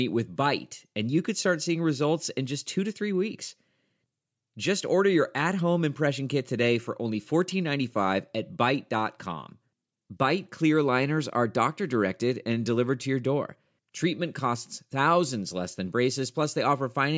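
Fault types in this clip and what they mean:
Nothing to flag here, as the speech comes through without any technical faults to list.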